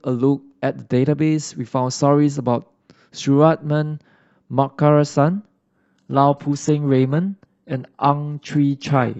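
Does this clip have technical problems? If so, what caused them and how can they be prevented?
Yes. At about 5.55 s the speech suddenly gets thinner and carries on that way to the end, with no gap at the switch. That's an adaptive stream at a lower bitrate: the connection slowed, so the player jumped to a cheaper version of the stream. The treble turns hazy and synthetic, and the artefacts rise, which fits a drop from roughly 96 kbit/s AAC to a 16 kbit/s HE-AAC rendition. To prevent it, give the player a steadier connection or a bigger buffer, or set a higher minimum bitrate in the stream ladder.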